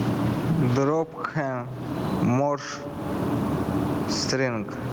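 Gain pumping runs through the whole of this speech clip, with the level swinging by something like 20 dB. Loud and quiet passages sit unnaturally close together, giving a squashed quality. The likely cause is input gain set far too high, with a fast limiter or compressor clamping down on each peak. The room noise sits about 43 dB below the speech.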